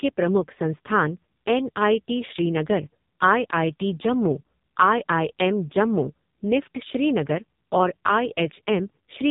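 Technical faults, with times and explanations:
Throughout, AMR narrowband mobile codec: heavy coding leaves the speech buzzy and synthetic, rebuilt from a vocal-tract model and sparse pulses, which fits AMR-NB at a very low rate, near 5 kbps. A spectrogram shows nothing above 3.8 kHz, and smeared, blurred harmonics below.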